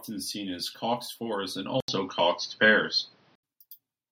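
At 1.80 s, after "as coxed fours and", an 80 ms gap. Then dull sound, nothing above 6.2 kHz, until 3.43 s. Likely input switched to a poorer device.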